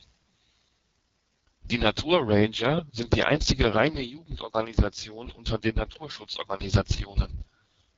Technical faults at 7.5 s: AMR wideband (HD Voice) codec

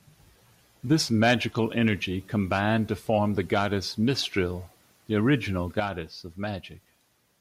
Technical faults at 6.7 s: sudden gain jump

